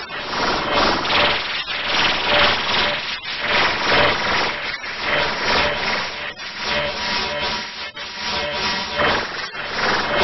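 Nothing in this recording of sounds stood out as a technical problem on listening.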